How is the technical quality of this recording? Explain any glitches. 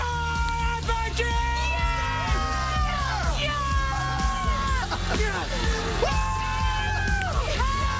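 Two brief glitches stand out, at 0.49 s and 7.22 s, both an uninitialised buffer. Each time, a block was played before any audio was written to it, so leftover memory came out as a loud 0.67 ms crack, which fits a 32-sample block. Unlike a dropout click, which is a gap or step in the waveform, these are sudden cracks of garbage. The audio passed through a G.722 call path, so nothing is heard above 8 kHz.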